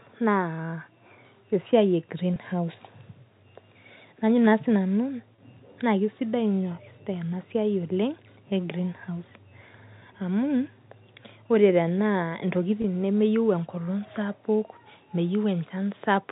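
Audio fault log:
2.34–2.36, 5.36–5.38 and 12.82–12.84 s, packet loss with pitch repetition: each 20 ms gap, likely one lost packet over this G.711 telephone-coded speech, is filled by repeating the last pitch period. The result is a brief held buzz rather than a dropout or click.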